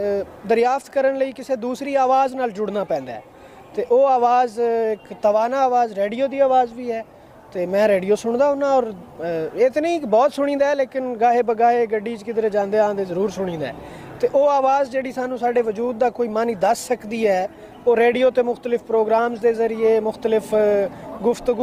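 The audio shifts abruptly to an adaptive stream at a lower bitrate at 13.16 s, and stays there to the end. Codec artefacts grow, with no gap at the switch. This fits an Opus stream dropping from about 64 to 24 kbit/s after the connection slowed.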